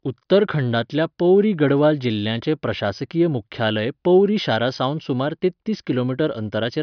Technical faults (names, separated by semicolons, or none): none